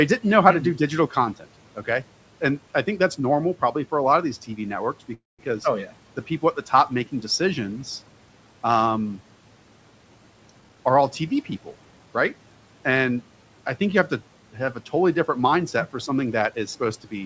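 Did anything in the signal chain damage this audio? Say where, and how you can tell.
Yes. A call audio freeze occurs from 5.14 to 5.41 s, just before "oh yeah the people". The stage is the network feeding the jitter buffer, and the likely cause is held-up packets that left the buffer empty. For about 0.25 s the receiver stretched the last sound into a fading buzz or hiss, and roughly 0.18 s of that sits near silence. The speech then resumes where it stopped. Nothing is lost, but a gap is inserted and the delay grows by that amount.

A jitter buffer speed-up runs from 10.60 to 12.07 s. It sits in the call's buffer stage, where more audio had built up than the buffer aims for. To drain the excess delay, the receiver repeatedly cut out pitch-period-sized slices, about 0.3 s in all. The speech plays at roughly 117 % speed with its pitch unchanged, so it sounds hurried over that stretch.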